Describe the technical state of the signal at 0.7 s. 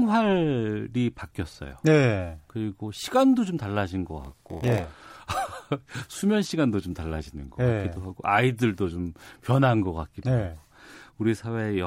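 At 0.7 s the speech signal is intact, with no audible fault at that point.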